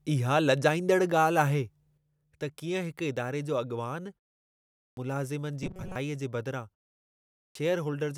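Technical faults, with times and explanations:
1.98–8.18 s, one channel drops out: the level falls abruptly by about 6 dB and stays down to the end, likely because one stereo side vanished before the mono sum.
4.59–4.97 s and 7.17–7.55 s, clipped start after a pause: after silences of 0.48 and 0.5 s, roughly 380 ms goes missing each time, so the sound starts abruptly as the output wakes back up.
5.63–5.96 s, robotic sound from repeated short buffers: a metallic 188 Hz buzz replaces most of the audio, likely from a roughly 5 ms chunk being looped while new data lagged.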